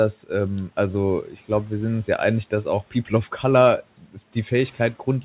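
In this speech clip, parts of words sound swallowed and faint at 1.25–1.5 s, 2.91–3.11 s and 3.98–4.35 s, dipping by about 10, 9 and 12 dB over roughly 100, 100 and 150 ms. This is speech cut by the noise suppressor, which mistook those quieter speech moments for noise and pulled them down with the background. Faint room noise sits about 26 dB below the speech, and the sound has nothing above 4 kHz, which fits a G.711 call codec.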